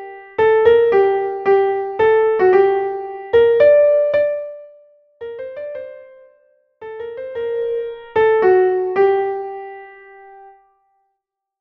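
Zipper noise at 4.11 to 4.55 s and 7.22 to 7.80 s: a fall of about 20 dB, then a rise, taken in about a hundred unsmoothed steps a second, ticks audibly and shows as a staircase envelope with faint vertical spectrogram lines.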